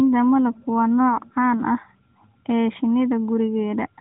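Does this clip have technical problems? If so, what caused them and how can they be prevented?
No, the speech comes through intact with no technical faults, carried over a narrowband mobile path consistent with AMR-NB at its 12.2 kbps top rate, so everything above 4 kHz is absent and the codec's light coloration is just what that channel normally produces.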